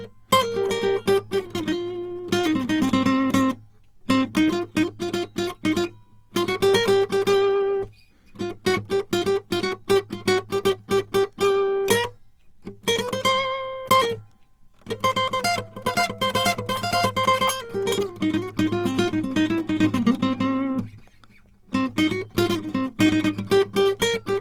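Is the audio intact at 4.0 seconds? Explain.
No. At 4.0 seconds the music carries the same damage heard across the entire clip: tones sound grainy, rough and noisy rather than clean, with no obvious spectral holes or swirling. This is likely Opus compression in its CELT music mode, which holds each band's energy and fills starved bands with folded or noise content. The degradation is plainly audible and points to a low bitrate near 24 kbps. Bandwidth stays full, extending to about 20.4 kHz.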